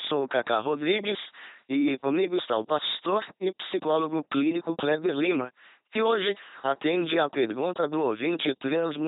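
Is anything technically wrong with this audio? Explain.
Yes. Throughout the speech, the audio has passed through an LPC-10 vocoder, with heavy damage. Each moment is rebuilt from a pulse train or noise driving a small all-pole filter, giving a buzzy, robotic voice, hiss or buzz where voicing is misjudged, and nothing above 3.9 kHz. This fits a 2.4 kbit/s stream.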